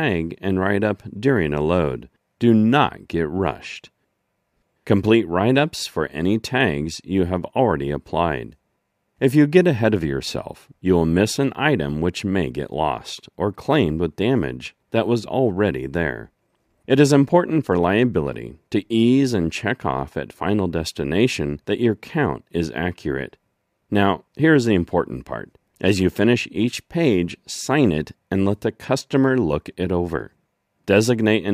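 No technical faults are audible.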